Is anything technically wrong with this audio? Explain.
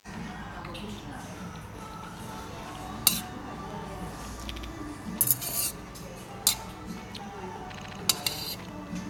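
Yes, there are repeated frames at two points. From 4.55 to 4.69 s, a block of about 70 ms plays twice more. From 7.76 to 7.97 s, the same length of block repeats three times. A run of compressed frames was delivered more than once, so the decoder replays it. This is heard as a stutter, and the sound gets longer. Unlike a dropout, nothing is missing; the material repeats instead.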